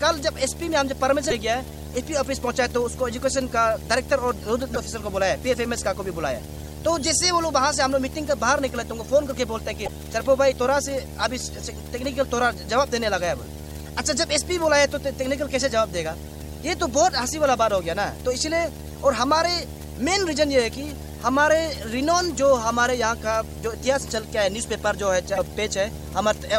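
Right from the start there's video or display buzz, a screen or cable leaking in at a 75 Hz field rate, sitting roughly 15 dB under the audio. Then damaged data in the compressed stream hits four times, at 1.27, 4.72, 9.84 and 25.33 s, each about 55 ms: the decoder misreads corrupted frames and loses sync there.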